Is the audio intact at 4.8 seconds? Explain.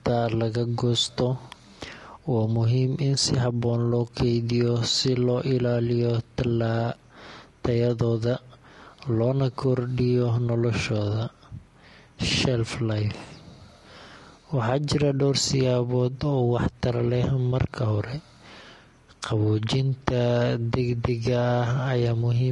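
No, at 4.8 seconds the speech has the rough, grainy texture that runs through the whole clip, with noise filling the gaps between harmonics and a thin, synthetic top end. That's likely low-delay AAC compression: short frames smear pitch detail, which fits around 32 kbps.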